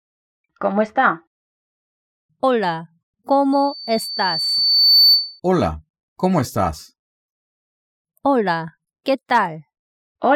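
A loudspeaker feedback squeal at 4.5 kHz runs from 3.52 to 5.4 s, growing over about a second and a half where interference would hold steady.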